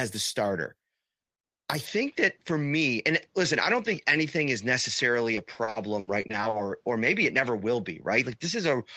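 At 1.85 s the speech abruptly turns duller and more boxy and stays that way to the end, with no silence and no obvious jump in loudness. A faint new background noise appears, roughly 45 dB below the speech. This is most likely an input switched to a poorer device, such as a second microphone or a headset call profile. On a spectrogram, energy above 7.6 kHz vanishes at that moment, leaving a flat ceiling, while the waveform envelope continues unbroken.

From 5.35 to 6.61 s, repeated packet loss makes the speech choppy, with pieces missing. Eleven short holes, the longest 80 ms, are each patched by stretching out the sound that came just before, so about 360 ms of material, some 29% of that stretch, is filled in rather than real. A spectrogram shows smeared, frozen harmonic bands repeating in place. The waveform shows small copied cycles where the natural envelope should continue.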